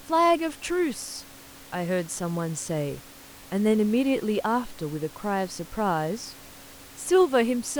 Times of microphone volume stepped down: none

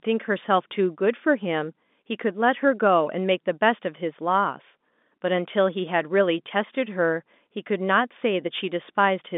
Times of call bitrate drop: none

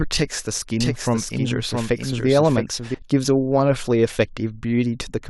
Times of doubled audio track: 0.80-2.94

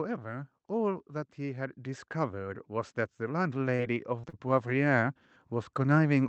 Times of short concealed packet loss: 3.75-3.81, 4.21-4.35

